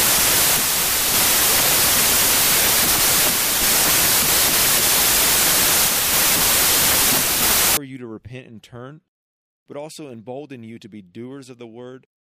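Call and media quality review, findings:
Loud broadband noise with the speech buried, fast and high-pitched by a third, 0.0–7.77 s, clearing before "you to repent". Wrong sample width in the decode path: it points to packed 24-bit samples read as 32-bit, scrambling bytes.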